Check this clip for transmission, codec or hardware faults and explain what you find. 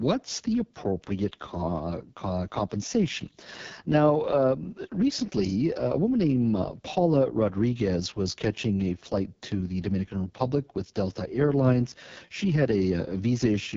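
There's one fault, running the whole way through: AMR wideband (HD Voice) codec damage. The speech sounds rough and raspy, with nothing above 7.5 kHz, which fits the lowest 6.6 kbit/s mode, where the pulse-driven vocal tract model gets too few bits to rebuild the voice cleanly.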